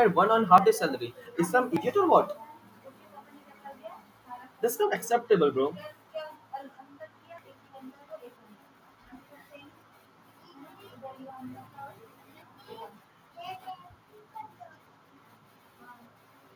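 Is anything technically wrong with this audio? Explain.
Yes. At 0.58, 1.77 and 7.38 s the speech jumps ahead, likely a dropped buffer (overrun), with roughly 50, 70 and 20 ms lost and spliced shut.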